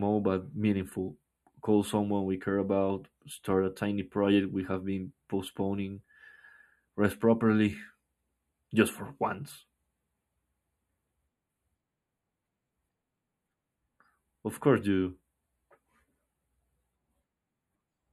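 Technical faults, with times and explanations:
throughout: channel delay (comb filtering). One channel arrives a fraction of a millisecond late, a lag of only a few samples, and the two are summed to mono, cancelling the shared speech at evenly spaced frequencies from around 5 kHz, leaving the upper range hollow and dulled.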